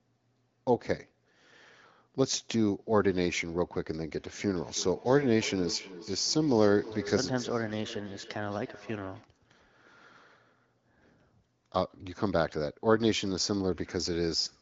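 From 4.47 s to 9.29 s the speech carries feedback echo between two devices. A second device in the same room plays the far side's audio, and its microphone sends it back into the call. Each echo canceller removes only its own playback, so the loop survives. Every phrase returns at a steady interval of roughly 300 ms, thin and ringing, peaking about 17 dB below the direct speech, beneath the band-limited sound of the wideband call.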